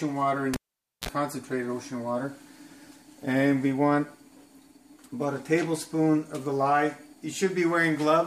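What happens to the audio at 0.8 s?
At 0.8 s the cable has been pulled and plugged in, and the signal path is broken. The fault runs from 0.54 to 1.09 s. A pop marks the break. Then about half a second of near silence follows while the connector is out. As it goes back in, only the tip touches at first. That picks up 60 Hz mains hum as a buzz lasting 45 ms. A second pop follows as the sound returns.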